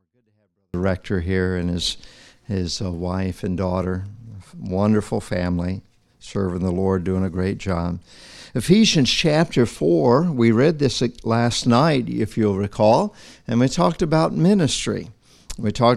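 From 0 to 0.74 s, a 24-bit alignment error makes the sound clean but about 48 dB too quiet. Low-byte 24-bit samples were read as 32-bit values.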